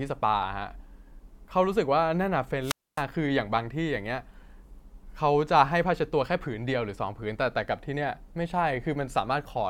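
A speech clip with a wireless microphone squelch dropout from 2.61 to 3.04 s: hiss rises as the radio signal fades, the receiver's squelch mutes the output for 261 ms, and the voice returns. That static lead-in distinguishes it from a clean digital packet-loss gap.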